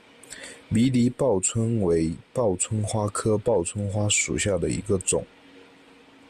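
From 4.34 to 4.45 s, between "报春花属" and "的一个种", the speech breaks into DAB burbling. It is a brief patch of short noise blips laid over the voice. Weak reception let bit errors slip past the error correction into the MP2 audio. Corrupted samples then put short blips of noise into single sub-bands. The damage hit 9 frames. That fits a low error rate, well under a tenth of a percent.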